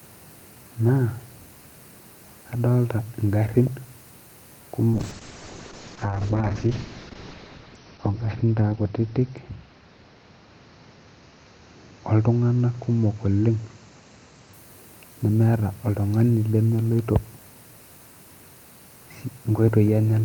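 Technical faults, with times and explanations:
4.97–14.59 s, call bitrate drop: the encoder falls back to far fewer bits, which fits a drop from 48 kbps to about 6 kbps. Audio bandwidth narrows from 20 kHz to 6 kHz, so the speech turns muffled and rough, worst for about 2.4 s.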